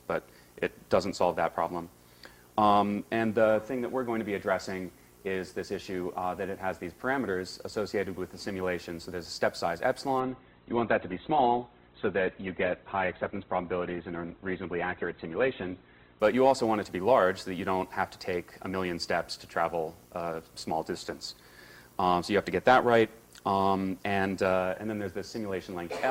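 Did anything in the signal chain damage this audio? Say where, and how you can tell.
Yes, at the network stage, where an adaptive stream dropped to a lower bitrate. From 10.2 s to 16.2 s the top end collapses: nothing survives above about 4.1 kHz, and the sound turns thin with codec artefacts rising. It switches in and out abruptly with no gap. The connection slowed and the player fell back to a cheaper rendition, which fits a switch from Opus around 64 kbit/s down to roughly 12 kbit/s.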